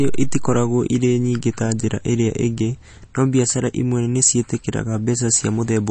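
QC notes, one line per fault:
throughout, MP3 compression: likely heavy MP3 encoding, fitting about 32 kbps, cut everything above 8.3 kHz, leaving the speech dull and plainly watery.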